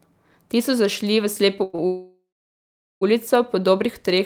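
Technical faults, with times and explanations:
1.63–1.75 s, call audio freeze: the sound is carried on as a fading buzz for about 100 ms, likely because packets were held up and the jitter buffer ran dry. Nothing is lost; the speech resumes where it stopped, about 100 ms later than before. Unlike a stall, the fill decays rather than simply holding.
1.75–1.80 s, short stall from a late packet: straight after, the last sound is held for a further 30 ms while one late packet is awaited, then the speech continues. This is a brief stretched sound with a slight buzz, too short to fade the way a freeze does.
1.86–3.03 s, call audio freeze: a much longer gap of about 1.15 s, likely caused by a long hold-up of packets. The carried-on sound dies away and about 770 ms of it is silence. The speech then picks up from the same point with nothing missing, now running about 1.28 s late, which marks this as a freeze rather than a dropout.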